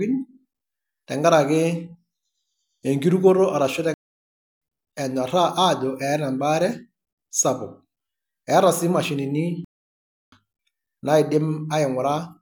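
The speech cuts to silence twice, from 3.94 to 4.62 s and from 9.65 to 10.32 s, each gap about 0.68 s long before the sound returns. These are playback stalls, most likely the player running short of data or being blocked.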